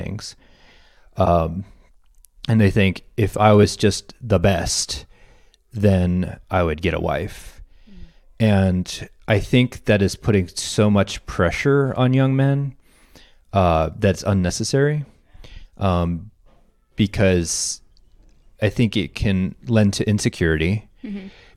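A speech recording with one fault: damaged data in a compressed stream at 14.48 s, heard as a very short blip. Corrupted bytes there prevent the decoder from reading the affected frame, so it loses sync and resumes at the next valid frame header.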